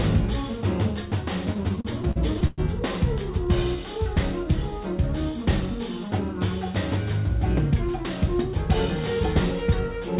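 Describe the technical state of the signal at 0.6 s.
At 0.6 s the signal is intact, carried cleanly through the call path with its narrowband telephone character and nothing above 4 kHz.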